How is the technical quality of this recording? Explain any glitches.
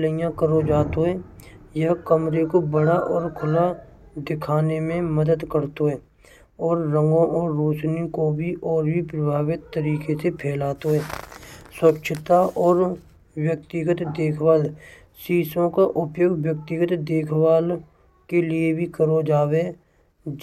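The recording has no technical glitches to explain. Nothing in the speech is interrupted, distorted or altered at any point.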